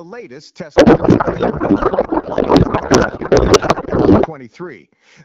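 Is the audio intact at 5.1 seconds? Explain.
Yes, the audio is intact at 5.1 seconds, with no fault at that moment beyond the light, even coding of the AMR wideband (HD Voice) codec at 12.65 kbit/s that runs through the whole clip.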